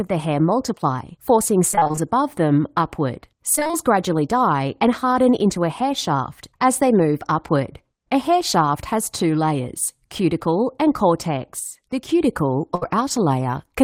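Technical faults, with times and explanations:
1.71–1.99 s and 3.55–3.75 s, repeated packet loss (robotic sound): short gaps, none over about 23 ms, come in quick succession after "the hair multiply forcing" and "above them upward". Each gap is patched with repeated sound, so half of each stretch turns choppy and robotic.
11.59–12.09 s, sudden gain jump: the speech and background drop together by about 6 dB for half a second, likely a digital gain step applied with no ramp.
12.75–12.83 s, burst of packet loss: about 60 ms drops out. The receiver stretches and fades the last sound across the hole, then playback resumes with that piece missing.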